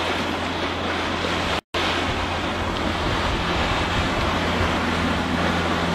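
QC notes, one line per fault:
1.59–1.74 s, gap at a join of encoded pieces: the sound stops dead for about 154 ms, then resumes exactly where it left off. Two separately encoded segments were butted together without trimming, so the first piece's padded final frame and the second piece's encoder start-up delay both survive as silence. On a waveform this is a flat-line hole with smeared edges. A spectrogram shows a full-height blank column whose borders are slightly smeared by the codec.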